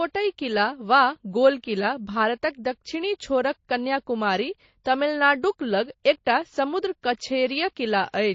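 MP3 compression damage runs throughout the speech, plainly audible from start to finish. The treble is cut off and weak frequency components flicker in and out between frames, giving a watery, swirly quality with chirpy sibilants and smeared onsets, likely from encoding at roughly 32 kbps.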